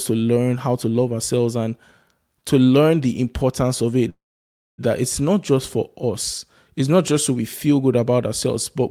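After "learn the importance of", at 4.09 s, comes a call audio freeze: the last sound fades as a brief buzz or hiss into 0.59 s of silence, likely from delayed packets emptying the jitter buffer. Unlike a dropout, nothing is lost. "that it's not just" resumes intact at 4.81 s, 0.69 s late.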